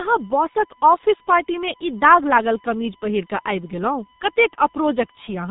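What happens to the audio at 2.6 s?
At 2.6 s, as through the whole clip, USB whine is present: current drawn by the USB bus in 1 ms frames leaks into the audio through power or ground. The result is a steady whine pitched at 1 kHz with harmonics, strongest around 10 kHz, sitting about 30 dB below the speech.

The speech at that moment also carries the G.723.1 codec's damage, as it does throughout. The codec, running at a low rate of 6.3 kbit/s, strips everything above 3.8 kHz and updates its voice model slowly, leaving the voice muffled and hoarse, with smeared consonants.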